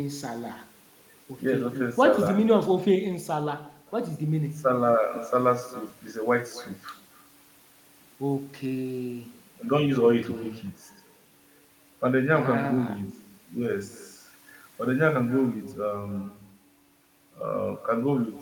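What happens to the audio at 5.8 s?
At 5.8 s the speech carries an echo with no canceller, present throughout the clip. The far end's loudspeaker output is picked up by its microphone and returned, so each phrase is followed roughly 300 ms later by a thinner copy about 19 dB down.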